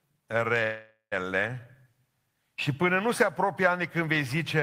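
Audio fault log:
0.63–1.14 s, call audio freeze: the sound stalls and its last instant is stretched into a fading buzz, then about 140 ms of silence, before resuming where it stopped. Nothing is lost, and everything after runs about 0.48 s late. Packets were likely held up in transit, emptying the jitter buffer.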